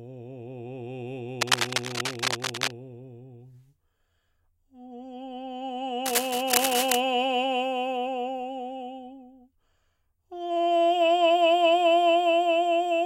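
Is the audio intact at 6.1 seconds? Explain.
No, it isn't. At 6.1 seconds the music is in the middle of a burst of cable scratch noise that runs from about 6.05 to 7.0 seconds, so nearly a full second. You hear dense, uneven scratching and rustling laid over the music, and it's loud, only about 5 dB below the music itself. The likely cause is a worn cable, connector or control being moved, so its contact resistance jumps around rapidly and throws those ragged noise bursts into the signal.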